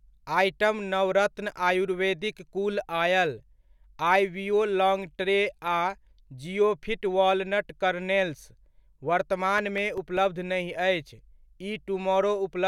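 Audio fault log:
9.39–10.76 s, CD scratch ticks: eight short, regularly spaced ticks over about 1.4 s, repeating at roughly five per second, with the longest lasting around 2 ms. The steady spacing points to a single surface blemish passing the pickup once per disc revolution. Each pass corrupts more data than the error correction can rebuild, so the player interpolates or mutes the damaged samples, leaving a brief click or micro-gap in the speech each time.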